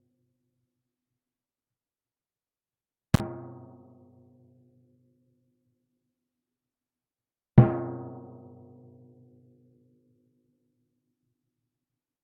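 At 3.14 to 3.2 s there is an intermittent contact fault. A loose connection somewhere in the signal chain breaks for a moment, and the sound drops out for roughly 39 ms. Each edge of the gap carries a short burst of crackle as the contact scrapes open and then closes again. While the line is open, a faint hiss remains where the sound should be. Then the signal returns as the connection restores.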